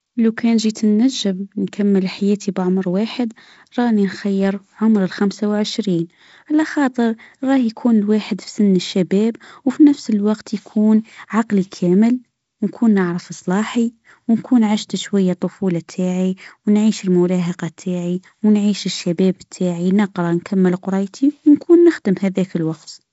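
A speech recording with no technical fault to report. It has passed through G.722 wideband telephone coding at 48 kbit/s, which leaves the sound band-limited with nothing above about 7.7 kHz and adds only light coding noise.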